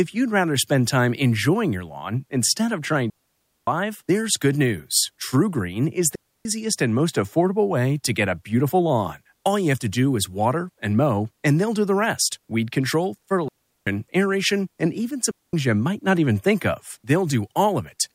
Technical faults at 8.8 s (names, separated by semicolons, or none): none